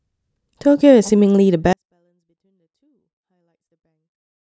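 At 1.73 s a 24-bit alignment error sets in: samples written as 24-bit integers in the low bytes of a 32-bit word are being read as full 32-bit integers. The speech stays clean but drops by about 48 dB at once, becoming almost inaudible until the end.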